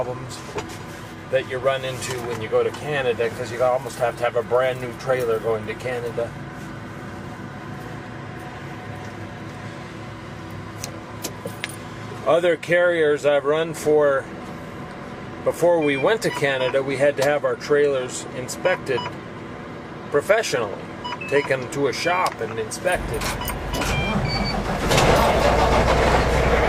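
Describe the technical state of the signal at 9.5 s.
At 9.5 s the signal is intact, with no audible fault at that moment.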